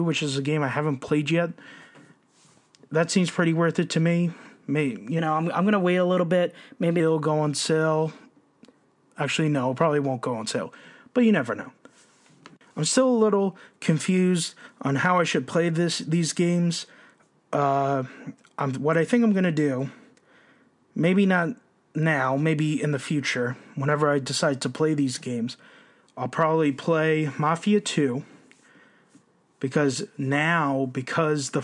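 A wrong sample rate fault runs from 5.19 to 7.00 s in this speech recording. In that stretch, the speech turns quicker and brighter, about 1.09 times normal speed and 1.47 semitones higher in pitch. Speed and pitch move together, which means the samples are being played faster than they were captured, with no conversion between the rates. That 1.09 ratio fits material recorded at 22 kHz being played back at 24 kHz.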